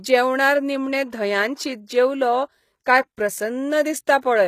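A speech clip. The treble sounds rebuilt and gritty, with s sounds turning metallic and nothing above 14.9 kHz. This is likely HE-AAC compression, fitting a bitrate near 20 kbps. At 2.84 s, a short hiss of about 19 ms precedes an attack, softening it. This pre-echo comes from codec noise spreading backward through its block.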